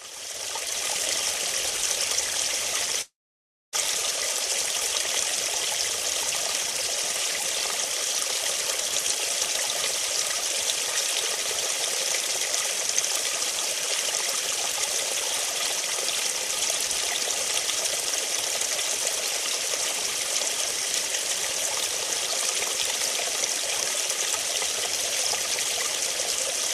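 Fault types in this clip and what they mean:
Long network dropout: from 3.01 to 3.76 s the audio stops and is replaced by a brief smeared continuation, then about 0.61 s of silence. It resumes about 0.72 s further on, skipping what was lost, which sets it apart from a simple pause or brief packet loss, likely a stalled stream.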